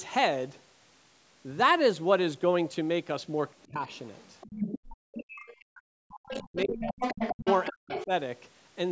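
A short speech recording with two call problems. From 3.61 to 5.65 s, and again from 6.28 to 8.05 s, the other side's voice leaks through, first about 10 dB under the talker and then louder at about 5 dB under, likely because the echo canceller left loudspeaker pickup in the mic. Speech is also suppressed in double talk: a brief dip of about 10 dB at 3.71 s, then deep cuts of roughly 40 dB from 4.93 to 7.02 s and from 7.35 to 8.11 s, likely as the canceller turns everything down while both sides overlap.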